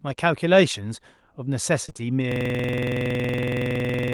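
A speech recording turns choppy from 1.85 to 2.01 s, with four short holes, the longest about 26 ms, and nearly half of that stretch patched by stretching the preceding sound. That is repeated packet loss (robotic sound), where audio packets keep arriving late or not at all and each gap is concealed before the next one hits. From 2.32 s to the end, the sound becomes a rapid stutter at about 21.5 Hz as one 46.44 ms fragment repeats exactly over and over. This is a system hang loop: the computer or driver stalled while the audio hardware kept replaying the same ring buffer, whose length fits a 2048-sample buffer.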